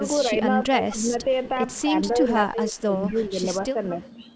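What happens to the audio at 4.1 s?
A faint delayed copy of the speech surfaces from 4.02 to 4.09 s, trailing about 212 ms behind, likely an echo leak from a loudspeaker the far-end canceller didn't fully suppress.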